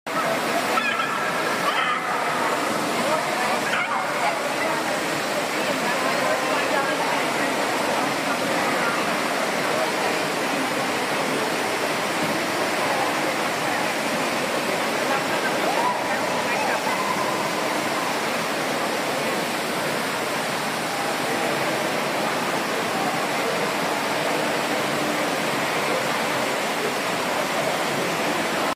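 No technical faults can be heard anywhere in the audio.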